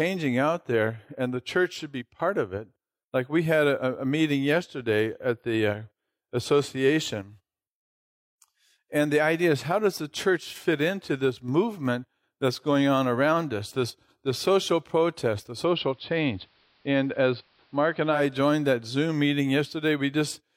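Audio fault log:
15.53 to 18.24 s, digital radio blending to analogue: after "this the social protest" the sound cross-fades over about 130 ms into duller, hissier audio, with hiss roughly 40 dB down and the level about 1 dB lower, returning before "joined that"; the receiver lost its digital signal and fell back to the station's AM broadcast.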